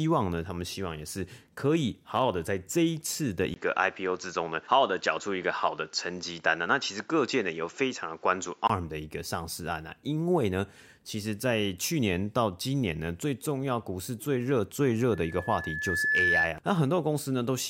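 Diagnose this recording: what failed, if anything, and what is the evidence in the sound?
From 3.54 to 8.70 s, after a 20 ms gap, content stops at 7.6 kHz over new noise about 40 dB down: likely an input switched to a poorer device.

Loudspeaker feedback squeal in the analogue chain: from 15.12 to 16.57 s, loop gain above one at 1.7 kHz builds a tone over about a second, to roughly 5 dB above the speech.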